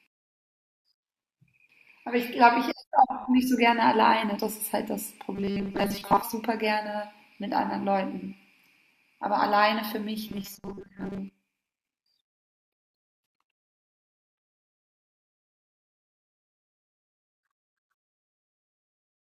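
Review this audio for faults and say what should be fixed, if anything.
Robotic sound from repeated short buffers occurs at 5.35–6.22 s and 10.28–11.19 s. The speech turns into a rigid metallic buzz at 200 Hz, likely from a 5 ms chunk replayed in place of most of the real audio. Unlike codec warble, this buzz keeps a fixed pitch. A larger playback buffer, so audio never runs short, would prevent it.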